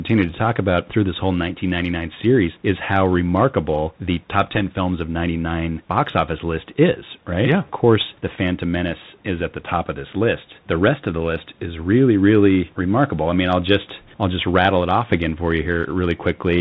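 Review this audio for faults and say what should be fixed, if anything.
Throughout the speech, the Bluetooth CVSD headset codec is plainly audible. Its one-bit adaptive delta coding, consistent with a 64 kbit/s CVSD link, passes nothing above 4 kHz. Sibilants turn scratchy, loud bright sounds distort when the step size cannot keep up, and a granular hiss sits underneath. On a spectrogram, energy stops abruptly at 4 kHz above a grainy noise floor, and the waveform shows smeared, stair-stepped transients. To prevent it, switch the headset to a wideband profile such as mSBC or LC3, or record through a wired microphone.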